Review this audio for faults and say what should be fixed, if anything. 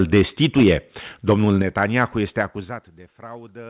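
Microphone overload, 0.0 to 0.7 s and again 1.28 to 1.62 s: the loudest peaks are squared off with a harsh, crackling edge. The likely cause is an input driven about 8 dB and then about 4 dB past the converter's limit, flattening roughly 3 and 2 percent of samples.

Microphone volume stepped down, at 0.63 s and 1.62 s: near the end of the first distorted stretch and right as the second ends, voice and background drop together in a single jump, by about 2 dB and then about 5 dB. This is likely the call software's gain control cutting the device input after detecting clipping.

Zipper noise, 2.32 to 3.07 s: a level fade of roughly 20 dB is applied as 2 dB steps about ten times per second instead of a continuous ramp. Each abrupt step leaves a small click, heard as a ticking that rides on the sound while the level falls. This sits within a call path limited to nothing above 4 kHz.

To prevent these, set the microphone input low enough to leave headroom above the loudest peaks and apply every gain change as a smoothed, per-sample ramp.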